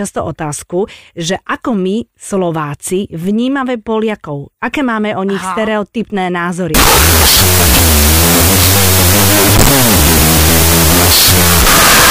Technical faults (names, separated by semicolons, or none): wrong sample width